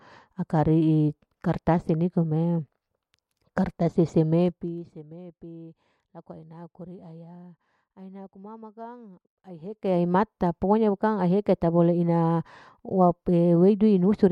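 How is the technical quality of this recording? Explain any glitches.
The recording has two bursts of zipper noise, both during level changes.

Zipper noise, 4.44 to 4.92 s and 9.6 to 9.98 s: the gain moves in 1 dB steps at around 50 steps a second with no smoothing. It drops about 20 dB, then rises about 20 dB, and each step clicks, so a fast ticking rides on the speech while the level slides.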